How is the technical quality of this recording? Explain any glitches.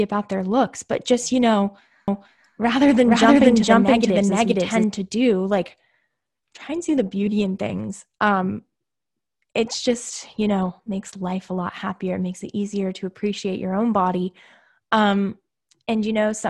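The recording has one clear glitch. Doubled audio track, 2.08 to 4.84 s, after "but just you know": likely a slower second capture path or a misaligned edit, so an equally loud copy trails about half a second behind, starting and stopping abruptly.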